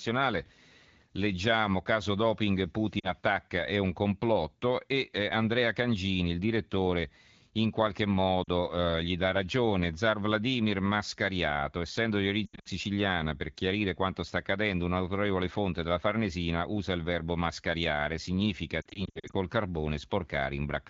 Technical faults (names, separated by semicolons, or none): lost AMR speech frames